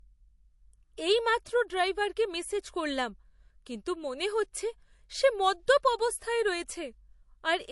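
From start to finish the speech has nothing above about 11.3 kHz, with the smeared, watery edges of heavy perceptual coding. The likely cause is low-bitrate audio saved at a high bitrate: an MP3 made at something like 48 kbit/s was re-encoded at a rate that fits 320 kbit/s. Unlike a clean high-bitrate file or a simple low-pass filter, the band-limit arrives together with the first encoder's artefacts, which the larger second encoding cannot undo.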